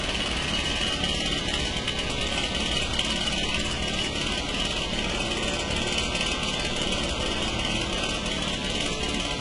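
Throughout, a fine roughness rides on the sound, swelling with loud and bright passages and vanishing in silence. That is sample clock jitter, a couple of microseconds of timing wobble leaving error about 30 dB down, unlike steady hiss.

The treble is also gritty and metallic and ends at 11.1 kHz, not smoothly dulled. That points to heavy HE-AAC compression, likely at around 12 kbps, with rebuilt highs.

From 7.8 to 9.14 s, a train of clicks adds about ten similar ticks at an uneven pace, about six per second, roughly as loud as the sound. They are heard in pauses too, so they are added pulses rather than gaps, likely from electrical interference.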